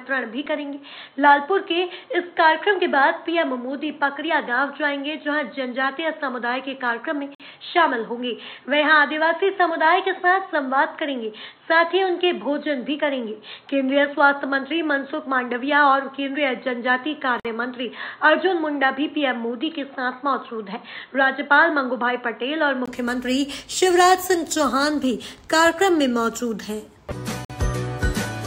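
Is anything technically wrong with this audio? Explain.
Yes, there are two problems.

From the start until about 22.88 s, the input was likely switched to a poorer device, such as another microphone or a headset's call profile. That device passes a narrow band, with nothing above 4.2 kHz, so the sound is dull and boxy and carries its own faint background noise, roughly 50 dB below the signal. At 22.88 s a brief silence of about 20 ms marks the switch back, and the full bandwidth returns with little change in loudness.

There is also a gap between chunks at 7.35 s, 17.40 s and 27.45 s. The audio was handled in pieces about 10 s long, and each join left 50 ms of silence rather than running straight on into the next piece. Nothing is missing, but each join cuts the flow with a short hole, and the holes recur at a steady 10 s interval.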